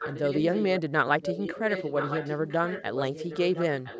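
From 0.0 to 0.82 s, 1.22 to 3.65 s, and 3.81 s to the end, a delayed copy of the speech trails it by 1.01 s. It sits roughly 10 dB down, fainter at the end. This is echo leak, likely a loudspeaker's echo canceller passing sound back.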